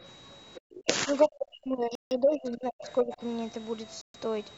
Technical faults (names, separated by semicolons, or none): other side's voice leaking through; speech suppressed in double talk; Bluetooth stall